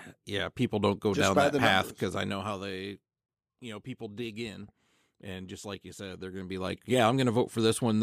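A speech clip with no technical faults to report.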